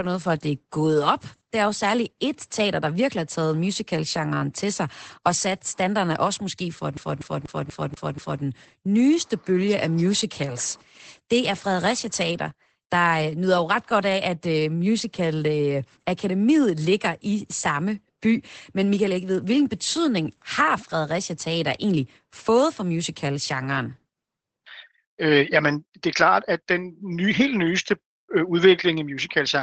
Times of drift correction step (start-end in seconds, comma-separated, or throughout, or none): none